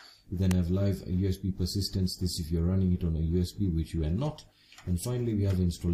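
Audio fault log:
0.51 s, electrical switching spike: a sharp snap of about 3 ms peaking near about -10 dBFS, likely a nearby switch arcing onto the line; a thin vertical broadband streak on a spectrogram, a lone needle on the waveform.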